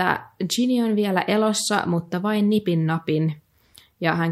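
No audible technical faults.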